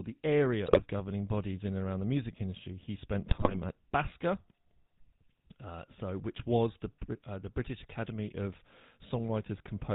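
The whole clip is coloured by the GSM full-rate codec. The speech carries a steady buzzy, gravelly roughness and nothing above 4 kHz, which fits the 13 kbit/s full-rate coder. The codec models the vocal tract and drives it with a sparse, regularly spaced pulse train, so the fine detail of the excitation is lost. The damage is plainly audible. Unlike bit errors, it never comes and goes.

GSM bit errors break in at 0.66 to 0.81 s, between "the area" and "governing bodies in and", and again, longer and harsher, at 3.28 to 3.58 s. Corrupted bits reached the decoder's filter, pitch and gain values, so individual frames come out with a bent spectrum or a sudden level jump. The result is squawks, pops and gargling. A lost packet would leave a gap or a smeared repeat, but here the decoder still produces sound. It is simply the wrong sound.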